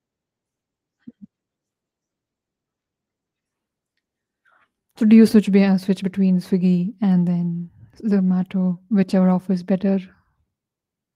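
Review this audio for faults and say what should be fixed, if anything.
No faults; nothing needs fixing.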